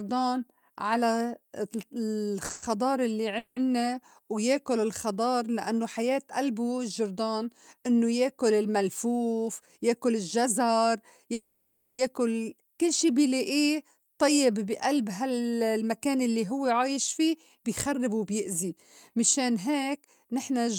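At 2.45 to 2.51 s, a short stall from a late packet holds the current sound for 40 ms while the jitter buffer waits. On a waveform it looks like a briefly repeated cycle, and on a spectrogram the harmonics stretch flat.

Call audio freezes follow at 2.51 to 2.64 s, 3.38 to 3.58 s and 11.34 to 12.01 s, likely from packets held up in transit. The last sound is extended into a fading buzz with no silence. A spectrogram shows frozen, smearing bands, and the waveform decays into a steady texture.

A jitter buffer speed-up runs from 9.32 to 10.76 s and again from 15.23 to 20.69 s, starting right after "لائيه طيّب بي ألب". The receiver trims pitch-period slivers to run about 7% fast at unchanged pitch, removing roughly a tenth of a second and then about four tenths of a second. The speech sounds hurried, and the harmonics stay level while syllables compress in time.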